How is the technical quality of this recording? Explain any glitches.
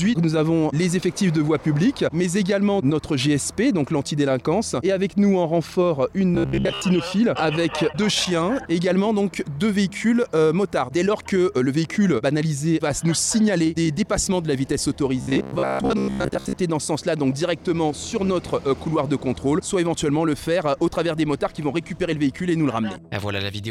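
The recording has two stretches of robotic sound from repeated short buffers, from 6.35 to 6.82 s and from 15.21 to 16.56 s. The likely cause is new audio arriving too seldom, so the playback fills the gaps by looping a fragment of about 15 ms and skips most of the real signal. That loop forces a steady 66.7 Hz buzz onto the sound, which turns rigid and metallic while loosely tracking the original.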